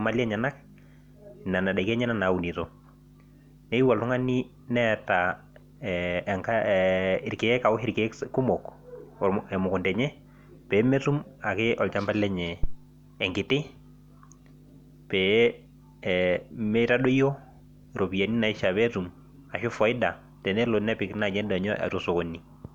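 At 12.63 s a phantom power thump hits the speech: a supply switched on or off at the live input sends a voltage step through the coupling capacitors. It sounds like a deep low thud peaking near -13 dBFS, decaying within about 34 ms and ending by 12.79 s.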